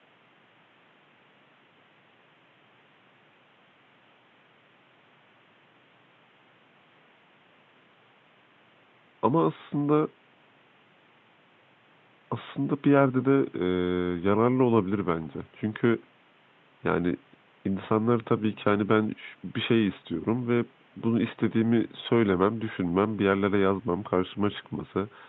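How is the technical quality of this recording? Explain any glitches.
No glitches or technical faults can be heard here.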